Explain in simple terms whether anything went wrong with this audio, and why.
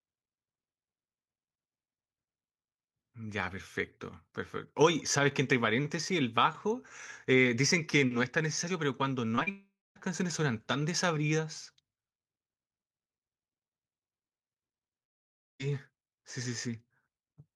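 Around 9.35 to 9.39 s and 9.43 to 9.48 s, short concealed packet loss causes brief smears where missing bits of audio were patched over.

From 9.50 to 9.97 s and 15.04 to 15.61 s, the sound fades into silence, then resumes with a part missing. A long network dropout is the likely cause.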